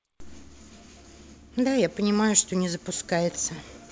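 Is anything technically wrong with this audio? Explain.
No, there is no technical fault in this speech, which has come over a wideband call path that carries nothing above 8 kHz, as expected for that codec.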